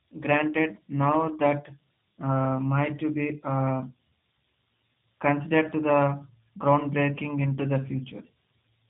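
Speech carries plainly audible G.729 codec damage from start to finish. Nothing above 4 kHz survives, so sibilants and consonant detail are dulled and the top end sounds cut off flat. The speech stays intelligible but sounds rough and slightly synthetic, because the decoder rebuilds it from a vocal tract filter, a pitch predictor and a few pulses per 10 ms frame, not the original waveform. This fits an 8 kbit/s G.729A encoding.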